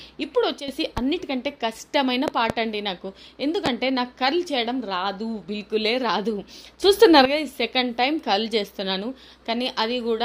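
At 0.60 to 0.68 s, a sudden gain jump drops sound and background noise together by about 10 dB, likely from a gain setting applied without a ramp. Loud pops follow at 0.98 to 1.01 s, as a double pop at 2.28 to 2.53 s, and at 3.66 to 3.69 s. Each is a sharp transient standing well above the sound, which continues underneath, likely from a voltage step such as a switch or driver glitch. At 6.83 to 7.25 s, a second sudden gain jump raises the level by about 10 dB, again likely from an unramped gain change.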